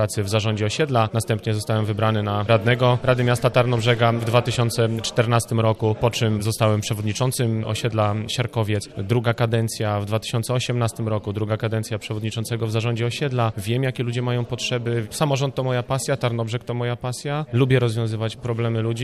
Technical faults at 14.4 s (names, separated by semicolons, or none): none